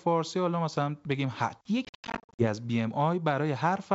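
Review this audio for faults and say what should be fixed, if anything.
Packet loss on an ADPCM call, 1.85–2.47 s: about 380 ms lost as hard-edged silent gaps (longest 90 ms). They show as flat waveform and blank spectrogram strips, with slightly distorted speech afterwards as predictor state resynchronises. Add packet-loss concealment, with redundancy or jitter buffering on the network path.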